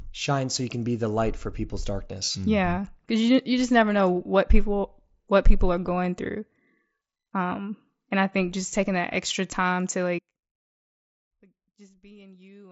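Concealed Bluetooth headset packet loss occurs at 0.79 s, 2.25–2.35 s, 3.28 s and 7.44 s. Headset-to-phone packets were lost, and the phone filled each hole by repeating the best-matching slice of recent waveform. The single 7.5 ms losses slip by almost unheard. The 2.25 s cluster, about 52 ms lost over 90 ms with the longest run near 22 ms, leaves a brief buzzy tone and a slight warble as real sound resumes over the mSBC wideband link.

An audio dropout to a faint residue begins abruptly at 10.19 s and lasts to the end. The sound cuts out mid-flow rather than fading, and only a faint leak remains, about 30 dB below normal level, likely because the signal was lost while the path after it stayed live.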